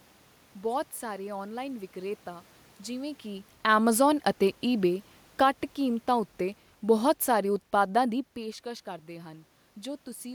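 From 4.71 s, just after "ਜਿਵੇਂ ਕਿ ਐਮਾਜ਼ਾਨ ਅਤੇ", the speech and the room noise behind it sink together by about 4 dB until 8.29 s, before "ਪੇਸ਼ਕਸ਼ ਕਰਦੇ". This is automatic gain falling: the gain control judged the input too loud or its background noise too strong and eased its gain down gradually.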